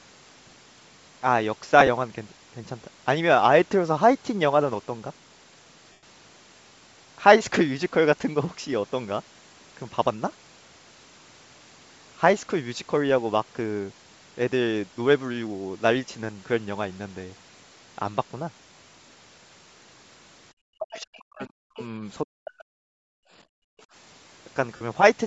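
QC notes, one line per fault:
Throughout: Bluetooth LC3 compression, likely the cause of a plainly audible breathy, grainy edge on the speech. Upper-band detail is replaced by shaped noise, which fits a 48 kbps LC3 stream with 7.5 ms frames. Unlike a plain low-pass, the top keeps hiss instead of going dull. The band stops at 8 kHz.
1.80–1.89 s, 5.92–6.03 s, 24.76–24.82 s: lost LE Audio frames. The decoder repeats the last spectrum with scrambled phase, so the speech smears into noisy buzz rather than clicking or dropping to silence. The first event is scattered specks over 75 ms, each no longer than about 15 ms. The second is a 105 ms smear that fades. The third lasts 45 ms.
20.62–21.80 s, 22.23–22.85 s: speech suppressed in double talk, likely from the echo canceller turning down the talker while the far side was also speaking. The voice ducks by up to about 40 dB in pieces, totalling roughly 1 s and then 0.7 s. 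The dips follow the overlap, not network timing.
20.91–20.97 s, 21.14–21.18 s: other side's voice leaking through, likely uncancelled loudspeaker echo. Brief scraps of a second voice surface about 20 dB and then about 30 dB below the talker. They are separate voices, not a smear of the talker's own sound.
23.13–23.87 s: background gated by the echo canceller. The room sound, not the voice, is pushed down by about 39 dB for roughly half a second in total, then returns when the canceller releases. The abrupt floor drop and recovery distinguish it from a fade caused by frame loss.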